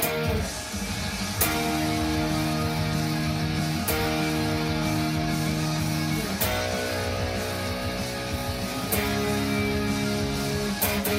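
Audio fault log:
No fault is heard in this audio.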